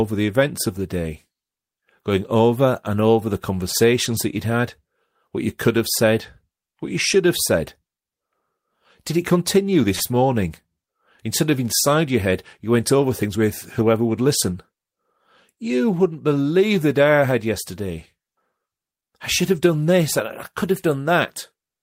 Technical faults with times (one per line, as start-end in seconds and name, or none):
9.95-10.15 short stall from a late packet
13.22-13.82 jitter buffer speed-up